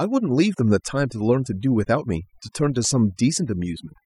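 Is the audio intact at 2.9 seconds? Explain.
No. At 2.9 seconds the speech is still under overdone noise removal, which runs through the whole clip. A noise reduction stage was pushed too hard. It cuts individual frequency bands deep whenever they sit close to its noise estimate. Quiet parts of the voice get removed along with the noise. The gaps fall to near silence with small twinkling specks.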